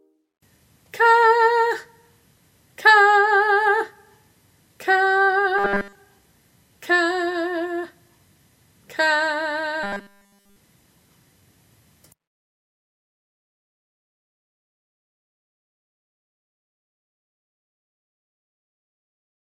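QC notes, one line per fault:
5.58–5.95 s: robotic sound from repeated short buffers. Across the whole span the sound collapses into a rigid, metallic buzz pitched at 200 Hz. That pitch matches a 5 ms fragment looping over and over, likely because fresh audio stopped arriving and the last short buffer was replayed in its place.
9.83–10.56 s: robotic sound from repeated short buffers. The same 200 Hz buzz replaces the sound for the full 0.73 s, likely the signature of a 5 ms loop standing in for the missing audio.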